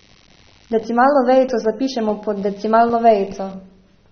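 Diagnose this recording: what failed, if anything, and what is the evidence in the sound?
Computer activity noise runs through the whole recording, a stage fault in the analogue wiring. Under the speech there is a buzzing, chirping layer pulsing at roughly 100 times a second, sitting well below the talker at around 35 dB down. Its rhythm follows computer load rather than the speech. Current drawn by the processor, graphics card or mouse shifts the ground shared with the audio circuit, and that fluctuation is picked up by the audio input.

The second fault is at the codec stage. The speech sounds dull and smeared throughout, with plainly audible codec damage, and nothing reaches above 6.3 kHz. The likely cause is AAC compression, with a band limit and texture that fit AAC-LC at about 24 kbps. At that rate the encoder quantises the spectrum coarsely against its hearing model and pulls the cut-off down, dropping upper sibilant energy and blurring the consonants.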